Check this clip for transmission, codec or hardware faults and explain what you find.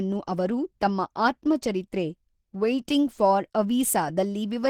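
One codec fault runs through the whole clip: Opus compression. The encoder has too few bits to spend, which points to something like 16 kbps and likely to Opus running in its hybrid speech mode. Starved bands get filled coarsely, so the speech sounds plainly hoarse, rough and grainy from start to finish, even though the spectrum still reaches about 20.2 kHz.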